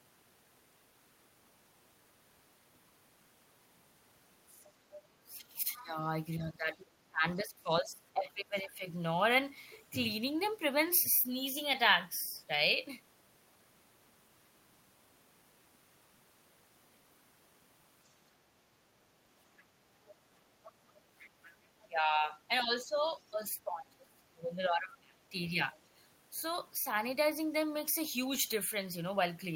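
From 4.47 to 4.97 s, a faint second voice sits well under the talker. This is the other side's voice leaking through. The far end is likely played on a loudspeaker and not fully removed by the echo canceller.

From 5.2 to 8.86 s, the talker's voice dips and breaks up, for about 3 s in total. At its deepest it drops by roughly 25 dB. This is speech suppressed in double talk. Both sides likely spoke at once, and the canceller turned everything down.

Within that stretch, from 5.76 to 5.86 s, a brief scrap of the other voice comes through. It is somewhat louder than the first leak, though still well below the talker. Its likely cause is the same incomplete echo removal.

From 20.06 to 21.84 s, the other voice leaks again. It is a longer trace, quiet but audible under the talker. An unremoved loudspeaker echo is the likely source.

From 21.82 to 25.59 s, the talker is suppressed once more. 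The voice fades and cuts out in pieces for about 3 s. The deepest drop is again roughly 25 dB. Simultaneous talk likely pushed the canceller to duck both sides.

From 22.59 to 22.64 s, a very faint blip of the other voice slips through during that suppression. It is likely one more small leak of unremoved echo.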